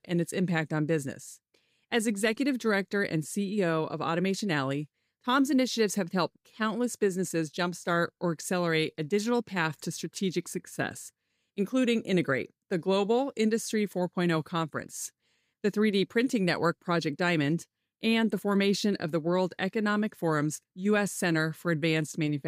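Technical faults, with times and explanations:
Nothing technical stands out in this speech recording; there's no fault here to point to.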